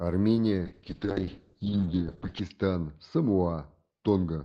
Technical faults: call bitrate drop

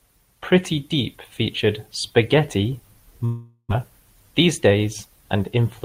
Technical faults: long network dropout

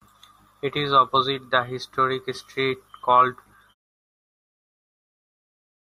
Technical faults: none

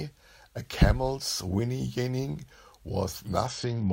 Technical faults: Bluetooth SBC bit pool drop

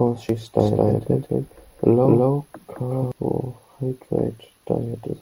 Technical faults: doubled audio track

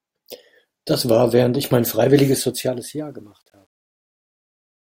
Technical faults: truncation distortion on a fade

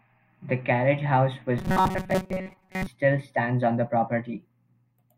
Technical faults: robotic sound from repeated short buffers

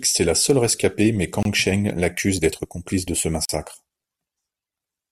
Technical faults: gap at a join of encoded pieces

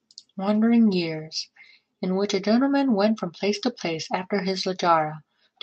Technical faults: none

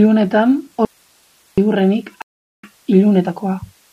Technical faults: audio dropout to a faint residue; stream reconnect

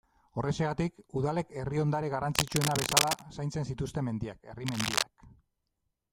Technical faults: cable scratch noise

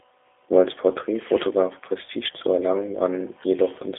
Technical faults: G.729 codec

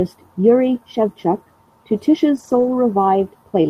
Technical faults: lost packet rebuilt from error correction

